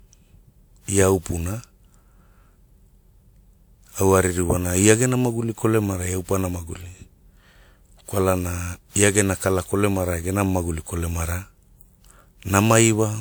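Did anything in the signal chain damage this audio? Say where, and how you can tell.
Yes, at the codec stage. The speech sounds swirly, smeared and hollow throughout, with blurred attacks, although the top end still reaches 20.1 kHz. That points to generation loss, likely from around seven passes through a WMA-style 128 kbit/s encoder, each adding fresh quantisation damage.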